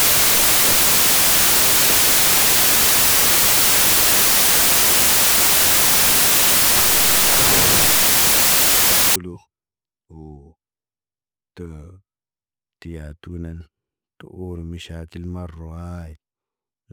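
Samples built from the wrong bytes run from the start to 9.16 s: the bytes of each sample are assembled wrongly, so rapidly changing low-order bits become the dominant part of every value. The speech is overlaid with loud, harsh broadband noise, close to white on the louder sounds.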